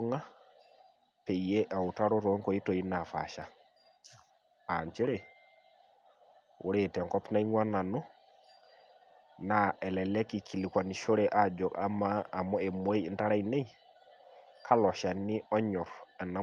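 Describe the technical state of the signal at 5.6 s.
At 5.6 s the speech signal is intact, with no fault present, only the ordinary character of the call path, whose Opus coding at 32 kbps limits the audio band to about 12 kHz.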